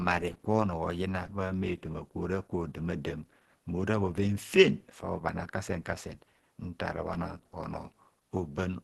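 Opus compression throughout: nothing above 12.2 kHz, and a plainly muffled, hoarse sound, likely the encoder's hybrid speech mode at a low rate fitting 16 kbps.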